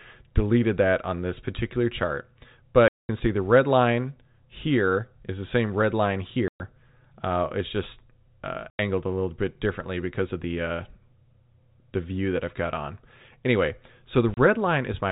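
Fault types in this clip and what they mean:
Packet loss filled with silence: chunks of the stream never arrived and the receiver just played dead air in their place, so the speech gets chopped by hard-edged holes. There are four: 2.88 s for 210 ms right before "see the red line", 6.48 s for 120 ms after "the same red line", 8.7 s for 90 ms between "it's just uh" and "a little bit differently", and a 30 ms blip at 14.34 s. Every gap is a multiple of 30 ms, which fits 30 ms packets.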